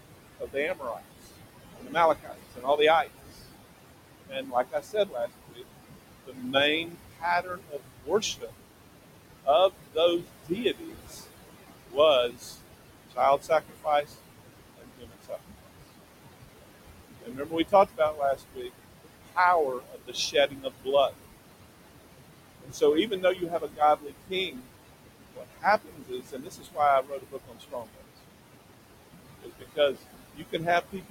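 Noise suppressor artifacts run through the whole recording. The room noise sits only about 10 dB below the speech, and the suppressor pulls the bands it judges to be steady noise down by about 21 dB, frame by frame. Between phrases the background drops away. Under the speech it comes back up.

Speech cut by the noise suppressor happens in six stretches: 0.14–3.35 s, 4.28–8.51 s, 9.44–15.68 s, 17.22–21.12 s, 22.63–28.03 s and 29.4–31.1 s. In each one, the suppressor mistakes quieter parts of the speech for noise and turns them down with the background, at worst by about 21 to 22 dB. Within each span the affected parts add up to between under a second and roughly three seconds, with the most in the 22.63–28.03 s stretch. Soft consonants and word endings come out swallowed or faint.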